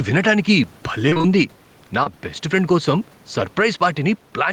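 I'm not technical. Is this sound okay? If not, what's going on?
No. Three problems can be heard.

Gain pumping runs through the whole clip. Loud and soft parts end up closer in level, so the sound is squashed. That is likely caused by the microphone level being set far too high, with an automatic limiter constantly pulling it down.

Repeated packet loss (robotic sound) happens from about 1.09 to 1.25 s. Bits of the call arrived late or not at all, several times in quick succession. Each gap was papered over by stretching the previous sound, and about half that stretch is patched, so it sounds choppy rather than just briefly blurred.

Short concealed packet loss happens once, from about 2.03 to 2.08 s. A single tiny piece of the call went missing and was filled in smoothly, leaving one brief smear or wobble. It is a single isolated blip, not a chain of robotic breakups like the earlier one.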